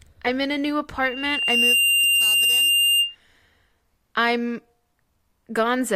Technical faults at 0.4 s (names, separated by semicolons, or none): none